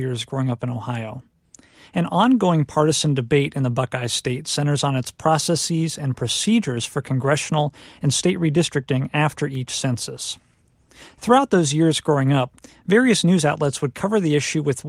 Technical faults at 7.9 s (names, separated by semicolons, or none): none